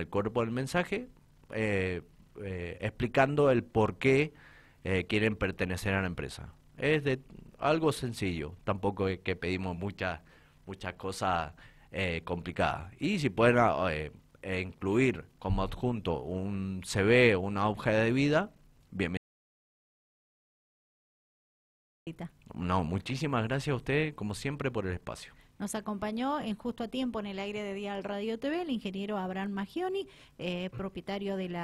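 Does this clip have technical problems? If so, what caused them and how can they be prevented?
Yes. An audio dropout to silence runs from 19.17 to 22.07 s. The sound cuts off abruptly into 2.9 s of silence with no room tone, unlike a noise gate, whose closing leaves fades and residual hiss. The likely cause is a lost input connection while recording continued. Securing cables and watching input meters prevents it.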